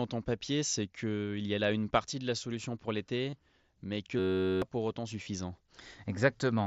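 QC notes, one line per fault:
3.30 to 3.33 s and 5.23 to 5.26 s, concealed Bluetooth headset packet loss: gaps of 22.5 ms and 30 ms, which fit three and four lost packets, are filled by repeating the best-matching recent waveform. This gives a brief held, buzzy tone and a slight warble as real audio resumes.
4.19 to 4.62 s, system hang loop: a 10.67 ms slice, which fits a 512-sample buffer, repeats about 40 times while the system stalls. It sounds like a steady buzz near 94 Hz in place of roughly 0.4 s of audio.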